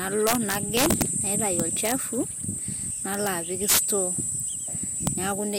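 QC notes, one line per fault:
0.27–1.02 s, 1.60–1.92 s, 3.14–3.27 s, 3.69–3.79 s and 5.07 s: integer overflow. Peaks overdriven by about 1 to 14 dB wrap to the opposite sign instead of limiting. This gives cracks sharper than clipping, most at 3.69 s.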